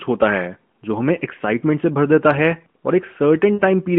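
At 3.54 s the speech has lost AMR speech frames, lasting until 3.61 s. About 60 ms is missing, which fits three 20 ms frames. The decoder repeats its last good settings at falling gain. The sound smears, fades, then returns weakly.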